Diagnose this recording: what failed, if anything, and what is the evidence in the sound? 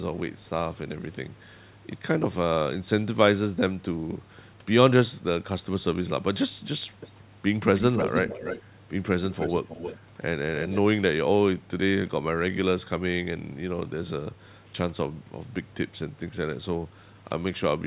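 A delayed copy of the speech trails it by about 0.3 s: faint scraps at 0.38–0.49 s and 7.0–7.11 s, then louder, up to near speech level, at 7.76–8.62, 9.32–9.99 and 10.63–10.8 s. This echo leak in call processing is likely loudspeaker pickup the far-end canceller missed.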